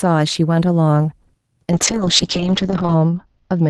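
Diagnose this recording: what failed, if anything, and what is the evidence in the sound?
Call bitrate drop in the codec: from 1.72 s, speech turns coarse and its bandwidth narrows from 12 kHz to 8 kHz, consistent with Opus falling to about 7 kbps.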